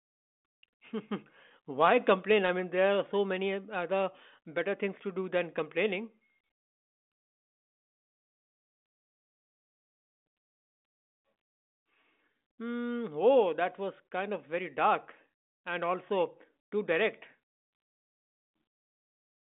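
No faults to report: the speech sits in a telephone band of 200 Hz to 3.6 kHz, with nothing above 3.8 kHz, as expected of G.726 ADPCM at 40 kbit/s.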